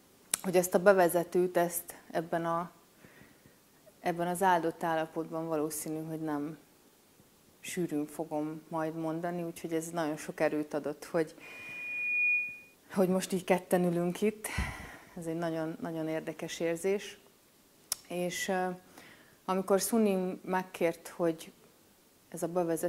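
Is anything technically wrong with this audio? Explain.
Yes. From 11.42 to 12.75 s there is loudspeaker feedback squeal: the microphone picks up its own loudspeaker, and at 2.4 kHz the loop gain exceeds one. A pure tone swells within a second to a few dB above the sound. A spectrogram shows a bright horizontal line, and the waveform's envelope grows steadily.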